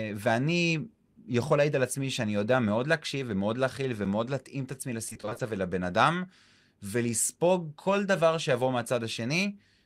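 From 5.09 to 5.41 s the speech suffers repeated packet loss (robotic sound). Audio data keeps failing to arrive in time, and each hole is covered by extending the last sound received. The holes are short, none longer than 20 ms, but they come in quick succession, which points to about eight separate dropouts, so roughly half of this stretch is patched rather than real. The speech turns choppy, with pieces missing.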